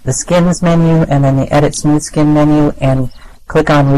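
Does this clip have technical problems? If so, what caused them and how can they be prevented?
No, there are no technical problems to address here.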